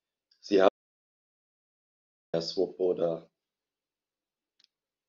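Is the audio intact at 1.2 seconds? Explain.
No. At 1.2 s the speech sits inside an audio dropout to silence running from 0.69 to 2.34 s, about 1.65 s lost. The input was likely cut off while writing continued, so the sound stops dead with no room tone, and the waveform shows a flat line and the spectrogram a fully blank band.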